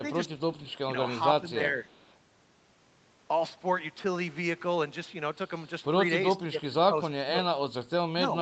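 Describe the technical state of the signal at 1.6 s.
At 1.6 s the speech sits inside a dip from 1.41 to 1.77 s, likely speech suppressed in double talk: the echo canceller, caught by both sides talking, turns the level down, about 5 dB at worst, for about a fifth of a second. Unlike packet loss, the sound is attenuated rather than gapped or smeared.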